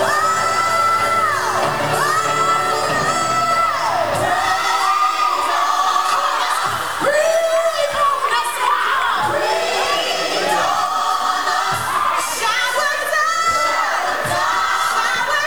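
Throughout, grainy distortion follows the signal, roughly 25 dB below it, roughening quiet passages; likely low bit depth without dither, truncated to 6 bits.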